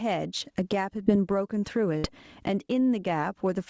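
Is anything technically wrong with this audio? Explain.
Yes. Three faults are present in this speech.

Gain pumping runs throughout. The gain swings by roughly 20 dB, pulled down on each loud sound, likely from excessive input gain with a fast limiter. A steady level change would not rise and fall like this.

A short concealed packet loss occurs at 1.04 to 1.08 s. About 20 ms went missing and was filled by extending the preceding sound, leaving a brief smear rather than silence.

A burst of packet loss follows at 1.98 to 2.05 s. About 60 ms was lost, and the fill holds the last sound while fading it before the audio jumps ahead. It is longer and more audibly decaying than the earlier glitch.

The band stops at 8 kHz, which fits a wideband call codec.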